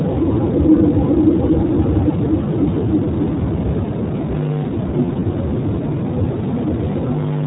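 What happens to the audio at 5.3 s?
Lost iLBC frames affect the audio from 5.06 to 5.27 s, ending just before 5.3 s. Over that 200 ms stretch, about 100 ms of audio went missing in short scattered gaps of roughly one frame each. For every gap the decoder repeated the last pitch cycle blended with noise, so the speech briefly turns into a held, slightly buzzy or breathy vowel sound. Because each iLBC frame decodes on its own, the speech recovers almost immediately after each gap.

Underneath, the iLBC codec is plainly audible at this moment and throughout. It cuts everything above 4 kHz and gives the speech a rough, synthetic edge, consistent with iLBC's 15.2 kbps mode using 20 ms frames.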